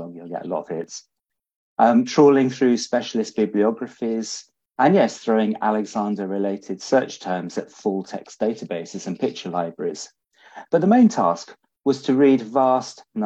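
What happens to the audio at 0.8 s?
At 0.84 to 0.87 s, an overlap between stream segments trims about 27 ms of sound, so the waveform jumps with a tiny skip rather than leaving a silent gap.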